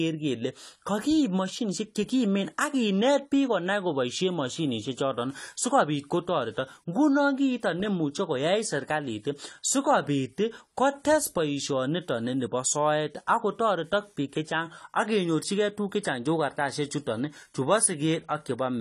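From start to finish the speech carries plainly audible codec damage, most likely from AAC compression at a low bitrate, which fits AAC-LC at around 32 kbps. With so few bits to spend on each frame's frequency lines, the encoder drops the top of the spectrum and lets some bands go hollow or fill with substitute noise. The result sounds dull and smeared, with a warbling, fizzy edge on sibilants and held sounds.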